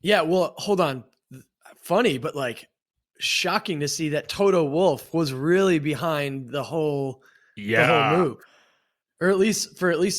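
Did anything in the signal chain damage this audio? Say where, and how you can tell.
No, nothing along the chain from capture to playback left an audible mark on this speech recording, so there's nothing here to chase down.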